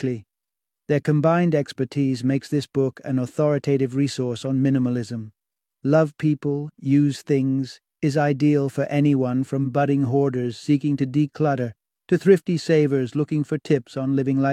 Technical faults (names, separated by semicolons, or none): none